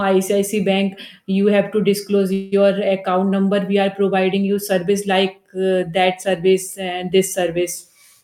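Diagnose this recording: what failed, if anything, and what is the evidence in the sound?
After "you have to disclose", from 2.33 to 2.54 s the sound stretches into a fading buzz, then resumes intact: a call audio freeze, likely delayed network packets emptying the jitter buffer.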